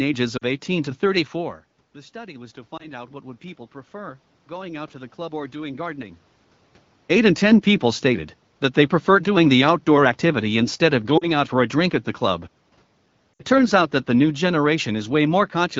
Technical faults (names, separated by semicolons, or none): lost AMR speech frames